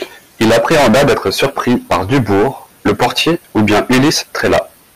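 From the first moment to the last, the speech reaches some stage in the chain at roughly 27 dB above what it can pass, so every peak is cut flat at the ceiling. This is hard clipping, and with about a fifth of all samples pinned there, the flattened tops pour harmonics high into the spectrum. The result is a harsh, buzzing fuzz riding on every loud syllable rather than occasional crackle.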